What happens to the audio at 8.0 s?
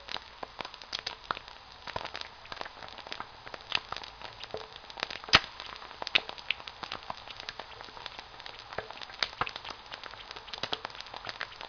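Nothing goes wrong at 8.0 s: the everyday sounds carry on intact through that moment, with no dropout, click, glitch or other fault.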